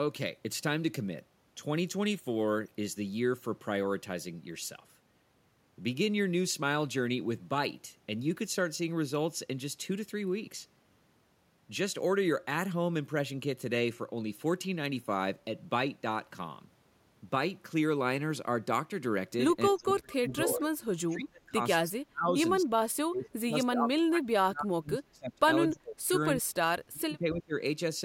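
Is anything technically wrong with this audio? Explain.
Yes. From 19.7 to 20.6 s, 21.1 to 26.6 s, and 26.9 to 27.6 s, the speech repeatedly dips by roughly 25 to 30 dB or drops out in pieces. This is likely speech suppressed in double talk: the echo canceller could not separate the talker from the overlapping far-end echo and attenuated both.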